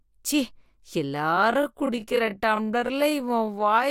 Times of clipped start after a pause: none

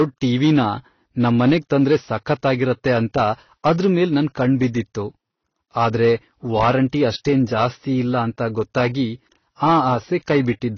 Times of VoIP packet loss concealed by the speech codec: none

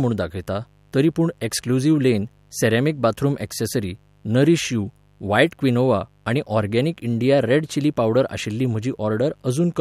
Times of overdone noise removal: none

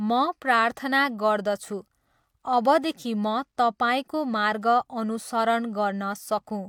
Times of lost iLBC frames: none

